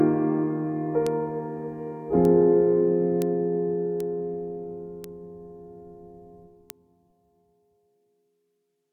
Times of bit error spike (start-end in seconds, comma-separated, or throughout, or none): 1.07, 2.25, 3.22, 4.00, 5.04, 6.70